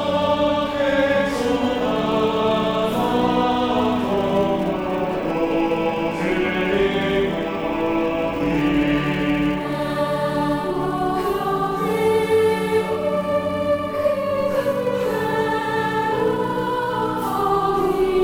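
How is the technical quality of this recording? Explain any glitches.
The recording is marred by one fault that runs through its whole length: a filter restarted on every block. The processing filter discards its state at each block boundary and begins again from silence, so every block opens with a small transient. These repeat as a steady buzz at about 345 Hz, which fits a 128-sample block, and the buzz rises and falls with the level of the sound.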